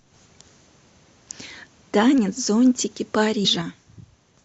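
Compressed frames skipped at 3.44 to 3.46 s: the speech jumps forward by roughly 150 ms, so a short stretch of audio never plays. The size of the jump points to around seven whole frames that were missing from the stream or rejected by the decoder as damaged. The speech simply resumes slightly further on.

One channel drops out from 3.62 s to the end: the overall level falls abruptly by about 6 dB and stays down. This is likely the loss of one stereo channel. After the two channels are summed to mono, material shared by both loses half its contribution, giving that 6 dB step, and anything carried only by the missing side vanishes, leaving the final stretch of speech noticeably quieter.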